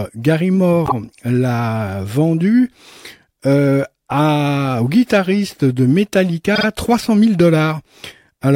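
A speech clip with a repeated frames fault at 0.85 to 0.92 s, just before "l'a vendu". A short stretch of compressed audio, two frames making about 52 ms, is played a second time. That gives a brief stutter. The clip is 52.2 ms longer as a result. It differs from a dropout or packet loss, where sound goes missing, because here the same fragment is heard twice.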